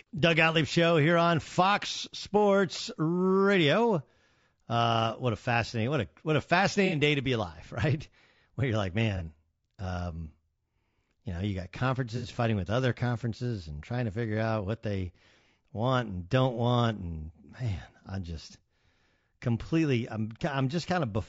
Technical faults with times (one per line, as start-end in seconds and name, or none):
0.00-21.28 low-delay AAC compression
6.86-6.93 AAC frame loss with concealment
9.17-9.22 AAC frame loss with concealment
12.17-12.26 AAC frame loss with concealment